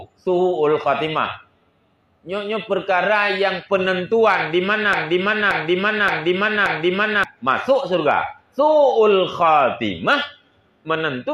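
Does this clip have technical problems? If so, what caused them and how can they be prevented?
Yes. A broken-record loop runs from 4.93 to 7.24 s: the same 0.58 s fragment repeats four times, identically and without fading like echo. A stalled player or stream likely resent its last buffer. Buffer monitoring that mutes on stall prevents it.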